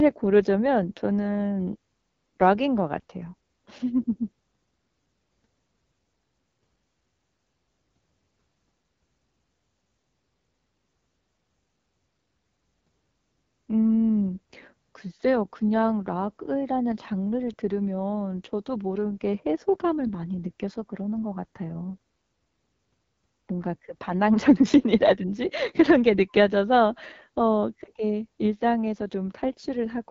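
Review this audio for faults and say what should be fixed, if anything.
The speech carries AMR wideband (HD Voice) codec damage throughout, plainly audible as a rough, raspy texture. Nothing lies above 7.7 kHz. The top band is only shaped noise, and the sparse pulse coding points to a low mode such as 8.85 kbit/s. Encode at 12.65 kbit/s or higher to prevent this.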